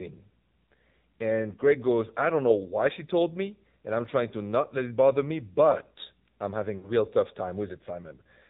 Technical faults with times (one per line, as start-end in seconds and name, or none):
0.00-8.50 AMR narrowband mobile codec
6.78-6.92 lost AMR speech frames